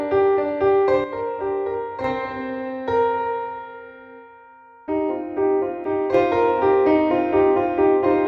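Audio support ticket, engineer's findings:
Likely one channel drops out of the stereo feed, twice: 1.04–2.04 s and 5.84–6.14 s. After the mono fold-down, content shared by both channels falls abruptly by about 6 dB, and anything carried only on the missing side vanishes. Symptom: sudden level dips, full level snapping back at 2.04 s and 6.14 s. Check the channel path, connector or interface for an intermittent loss on one side.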